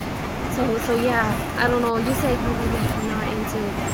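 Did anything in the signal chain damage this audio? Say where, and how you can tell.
No, nothing in the signal chain damaged this speech.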